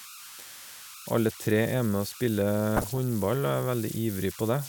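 Right from the start there's a whistle sitting around 1.5 kHz, about 16 dB below the speech. Those are converter idle tones: an undithered delta-sigma converter slips into repeating bit patterns on low-level input, so you get that thin tone in the gaps and a grainy edge under quieter passages.

Then from 2.77 to 2.98 s the speech turns to burbling. That's DAB burbling. Bit errors from weak reception got past the error correction into the MP2 data, so wrong samples put short blips of noise into single sub-bands. The length of the burst fits roughly ten frames being hit, and the amount of damage points to an error rate of around half a percent.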